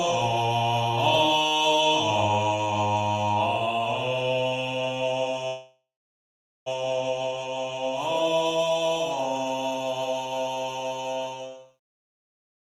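At 5.47 s the audio stalls in a call audio freeze that lasts until 6.68 s. The last sound carries on briefly as it fades. It then drops to near silence for about 0.84 s. At 6.68 s the audio resumes from where it stopped, with nothing lost. Everything after is pushed about 1.19 s later. The likely cause is packets held up in transit, letting the jitter buffer run dry.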